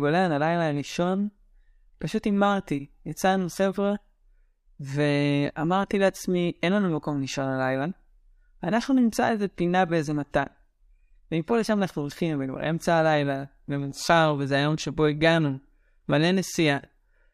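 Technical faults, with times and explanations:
No technical faults can be heard anywhere in this speech.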